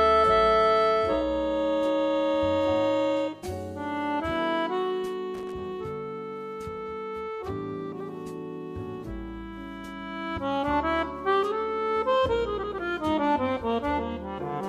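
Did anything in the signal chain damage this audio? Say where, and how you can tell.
Yes. The analogue wiring has a loose connector crackle from 5.34 to 5.56 s. A worn or dirty contact was making and breaking as it shifted, chopping the signal, heard as a brief irregular burst of scratchy crackle.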